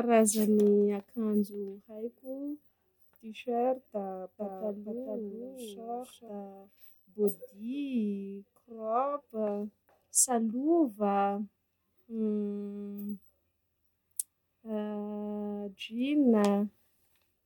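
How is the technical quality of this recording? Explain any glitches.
One glitch affects the speech between 4.38 and 6.28 s. A doubled audio track appears there: a full-band copy trails by about half a second, roughly 5 dB quieter, likely from a second, slower capture path. It starts and stops abruptly, and a spectrogram shows every feature repeated at that fixed offset.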